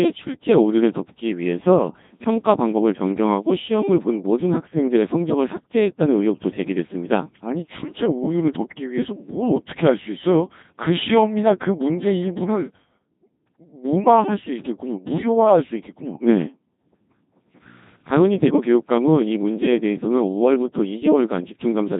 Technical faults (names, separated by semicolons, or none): Codec 2 vocoder